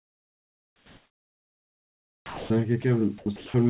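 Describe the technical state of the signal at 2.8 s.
Sound dropped by the voice detector, likely, from 2.82 to 2.84 s: for 20 ms the speech vanishes and a thin bed of steady noise stands in for it, then the speech resumes. The sender's voice detector probably judged that brief stretch to be background and stopped transmitting, so the receiver filled the 20 ms gap with comfort noise. Around it, the audio carries the narrow telephone band of the call codec, with nothing above 4 kHz.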